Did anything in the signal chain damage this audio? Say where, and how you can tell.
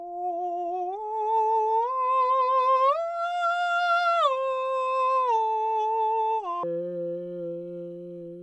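Yes. The damage is a wrong sample rate at the playback stage. From 6.63 s to the end of the music at 8.42 s, everything suddenly runs at half speed. The pitch drops a full octave, 12 semitones, and the tempo slows to match. Speed and pitch moving together by the same ratio shows the samples were clocked out without conversion. The halving fits 44.1 kHz material played back at about 22 kHz.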